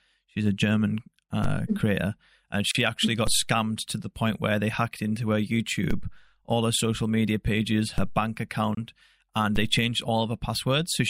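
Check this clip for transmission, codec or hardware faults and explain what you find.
Two faults are present in this speech: repeated DC steps and short gaps at the joins of separately encoded pieces.

DC steps occur at 1.44, 3.27, 5.91, 7.98 and 9.56 s. The one at 3.27 s falls between "actually got" and "scammed to the point", and the one at 7.98 s comes just after "her social media pages". At each, the waveform's zero line jumps abruptly to a new offset, which then bleeds away through a roughly 2 Hz high-pass response. Each step is heard as a dull low thump, while the speech carries on unaffected.

Gaps at a join of encoded pieces appear at 2.71 to 2.75 s, lasting 35 ms, and at 8.75 to 8.77 s, lasting 24 ms, just before "and they changed". The gaps are 6.0 s apart, which points to pieces encoded separately and concatenated without removing the encoder start delay and last-frame padding. 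The result is a brief dropout with smeared edges, after which the speech resumes exactly where it broke off.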